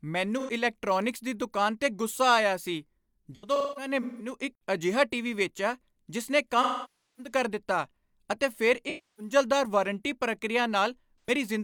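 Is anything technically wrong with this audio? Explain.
Yes, the speech has AAC frame loss with concealment: lost frames get patched from the last good spectrum, so the gaps come out smeared and phasey.

It happens five times:
0.39–0.50 s, just before "ਇਲੈਕਟ੍ਰੌਨਿਕਸ ਦੀ ਦੁਕਾਨ ਤੇ", about 85 ms lost.
3.35–4.33 s, scattered, with the longest run around 200 ms.
6.62–7.32 s, right after "ਟੀਵੀ ਵੇਚਿਆ ਜਿਸ ਨੇ", about 555 ms lost.
8.89–9.33 s, after "ਦਿੱਤਾ ਅਤੇ ਫਿਰ", about 300 ms lost.
11.20–11.30 s, about 85 ms lost.

The short ones are quick noisy blurs. The longer ones sag toward silence before the sound fades back in.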